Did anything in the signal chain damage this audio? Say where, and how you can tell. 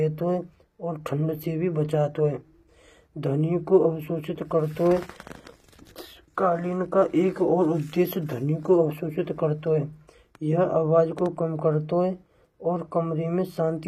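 Yes, at the codec stage, throughout the clip. Codec damage is plainly audible, and nothing sits above 15.5 kHz. This is likely HE-AAC compression, consistent with a low bitrate near 24 kbps. The treble is rebuilt from copied lower bands, so its harmonics don't match.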